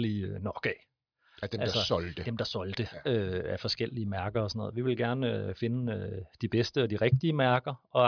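No technical faults can be heard in this speech clip.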